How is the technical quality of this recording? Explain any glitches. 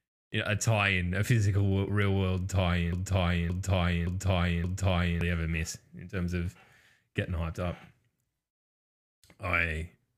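The recording has one clear glitch, a broken-record loop from 2.93 to 5.21 s. The playback or stream likely stalled and kept resending its last buffered fragment, so a 0.57 s slice right after "a physical real world" repeats four times back to back. The audio meant for that stretch is lost, and the sound resumes at "ever miss in terms".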